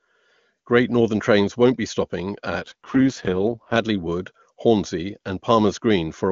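From 2.62 to 3.78 s the speech turns rough, raspy and synthetic with no gap or band loss. This AMR rate drop fits the codec falling to about 6.6 kbit/s.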